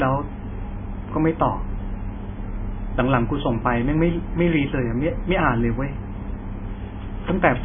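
Speech, likely run through heavy MP3 compression at a very low bitrate near 16 kbps: throughout, nothing remains above 3.5 kHz, so it sounds dull, watery and swirly.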